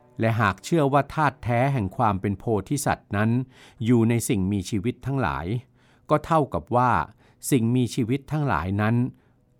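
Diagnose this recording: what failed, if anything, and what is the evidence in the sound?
Nothing failed here; no fault is audible anywhere.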